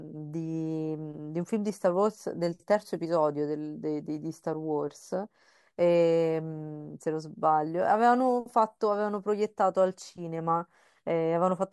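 Nothing in the recording of speech points to a technical fault: there are no gaps, interruptions or sudden changes.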